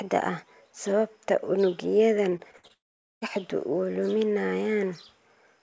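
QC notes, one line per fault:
2.30–2.71 s, repeated packet loss (robotic sound): five short holes open in quick succession, the longest about 59 ms. Each one is bridged by stretching out the last bit of sound, so roughly a third of this span is patched audio and about 140 ms is simply gone, giving a choppy, robotic texture. On a spectrogram the harmonics smear into flat, repeated blocks; the waveform shows looped, evenly shaped segments breaking up the normal envelope.
2.73–3.23 s, long network dropout: for about half a second the audio stops. A brief buzzy continuation of the preceding sound fades out, then about 440 ms of near-silence follows before the signal resumes further on, with roughly 480 ms of material never heard. This is likely a stretch where no packets reached the receiver and the concealment gave up. The waveform shows a short decaying tail into a flat line; the spectrogram goes dark across the band, which tops out at 8 kHz on this G.722 call path.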